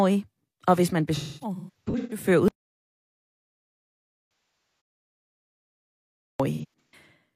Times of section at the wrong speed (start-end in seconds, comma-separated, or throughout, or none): none